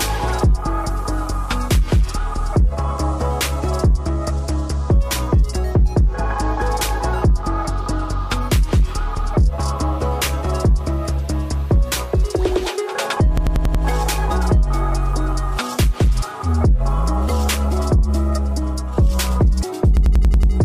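At 13.38 to 13.84 s and again at 19.97 to 20.53 s, a system hang loop replays one 93 ms slice five and then six times, a 10.8 Hz machine-gun stutter that fits a 4096-sample buffer. Unlike an underrun dropout, it leaves no gaps, only identical repeats.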